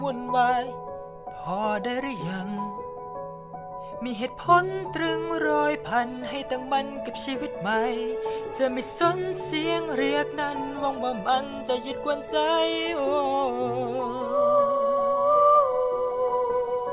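No technical faults are audible.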